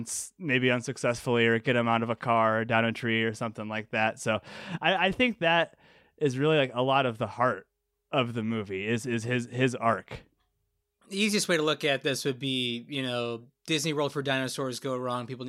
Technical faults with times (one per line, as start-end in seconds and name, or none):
none